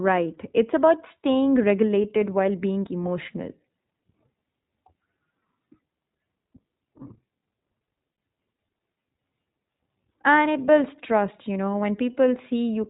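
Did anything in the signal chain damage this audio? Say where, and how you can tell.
Yes, at the codec stage. The whole clip runs through the iLBC codec. Nothing above 4 kHz survives, so speech sounds narrowband and muffled. The damage is plainly audible as a rough, slightly synthetic texture. That fits 20 ms iLBC frames at about 15.2 kbps.

At the network stage, there are lost iLBC frames from 8.12 to 8.18 s, about 60 ms. The decoder repeated the last pitch cycle with added noise. It sounds like a brief held, buzzy vowel. That fits three lost 20 ms frames. The speech recovers almost immediately afterwards.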